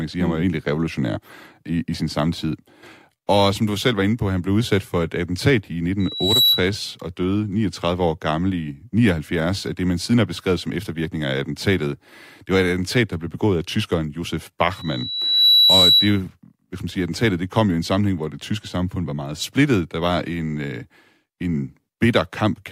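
Loudspeaker feedback squeal at 6.00–6.69 s, before "og døde", and again at 14.76–16.21 s, before "hvis man siger attentatet": a 3.9 kHz tone swells over about 0.4 s and 0.7 s respectively to above the speech. A spectrogram shows one bright horizontal line that thickens as it grows.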